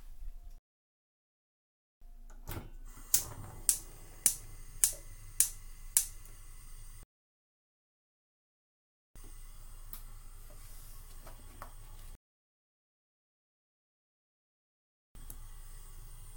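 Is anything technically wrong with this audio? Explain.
Yes. The player suffers three rebuffering stalls, running out of downloaded audio and waiting for more. The sound drops to silence at 0.58 s for 1.4 s, at 7.03 s for 2.1 s, and at 12.15 s for 3.0 s. Each time it resumes exactly where it stopped, adding time without losing any audio.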